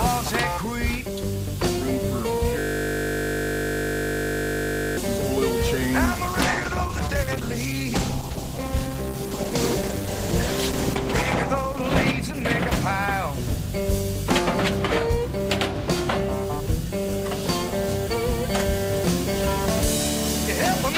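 From 2.59 s to 4.97 s there is a system hang loop. The host or audio driver stalled while the sound hardware kept replaying the last chunk held in its ring buffer. That chunk is 20 ms long and repeats about 120 times. Because the loop is so short, the result is a steady 50 Hz buzz with a fixed, mechanical quality rather than a stutter, and it cuts off abruptly when normal playback resumes.

A call bitrate drop runs from 6.07 s to 14.37 s. The sender's bandwidth estimate fell, and the encoder was forced to spend far fewer bits per frame. The audible degradation fits a step from around 48 kbps down to roughly 12 kbps, which holds at its worst for about 5.7 s. At that rate the codec quantises coarsely and discards the upper band, so the sound turns muffled and watery. Clarity returns only as the bitrate climbs back toward 14.37 s.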